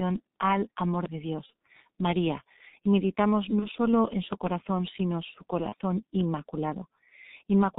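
Throughout, the speech carries heavy G.723.1 codec damage. Nothing comes through above 4 kHz, so the sound is muffled, and the slowly updated voice model leaves it hoarse, with consonants smeared together. The dullness and roughness are there continuously, and the bandwidth is narrower than wideband VoIP, with the codec running at 6.3 kbit/s.

Three brief dropouts show VoIP packet loss concealed by the speech codec: 1.46 to 1.52 s, just after "al amor de"; 3.59 to 3.69 s, after "y meditamos"; and 5.69 to 5.75 s, after "sino su". In each, the decoder lost its input and repeated its last pitch and filter at falling gain. The result is a short buzzy or noisy, fading stretch instead of silence or a click, and the voice stays weak briefly afterwards. Each fits a single lost 30 ms frame.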